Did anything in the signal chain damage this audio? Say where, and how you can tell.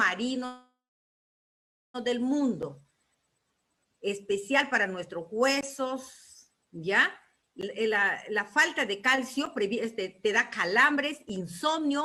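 Yes. From 0.45 to 1.96 s the sound stalls. The last bit carries on briefly as a fading buzz or hiss and then goes silent for about 1.2 s before picking up exactly where it left off. That's a call audio freeze, likely caused by delayed packets draining the jitter buffer at the network stage. It inserts about 1.5 s of gap without losing any content.

Later there's jitter buffer speed-up in two stretches. From 7.67 to 10.29 s the audio runs at about 110% speed, and from 10.69 to 12.03 s at about 122%, with the pitch unchanged. The receiver is trimming pitch-period-sized slices to shed excess buffered delay, roughly 0.3 s per stretch, so it sounds hurried.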